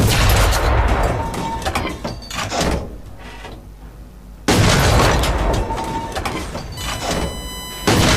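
Current drawn by the USB bus in 1 ms frames leaks into the audio through the power or ground, producing USB whine from 6.77 s to the end at 8.17 s: a steady, fixed-pitch tone on a 1 kHz series, strongest at 3 kHz, roughly 15 dB below the wanted sound.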